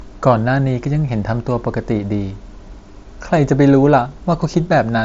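Nothing in this speech clip counts as a fault, since it's just a Bluetooth headset link on the mSBC codec doing its normal thing, with the sound topping out a little under 8 kHz.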